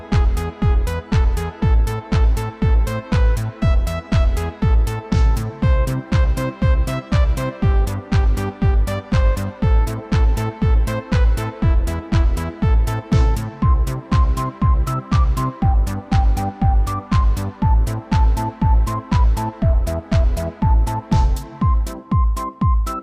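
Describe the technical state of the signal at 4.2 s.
At 4.2 s the signal is intact, with no dropout, distortion, glitch or other fault audible at that point.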